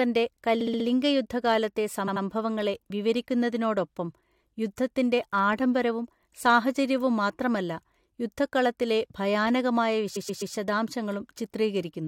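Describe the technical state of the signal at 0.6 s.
At 0.6 s the speech breaks into a stutter: one short fragment plays again and again. This is repeated frames, running from 0.60 to 0.85 s. A block of about 64 ms, which fits a run of three compressed frames, was written or sent more than once. The decoder plays it four extra times, which adds 256 ms to the audio.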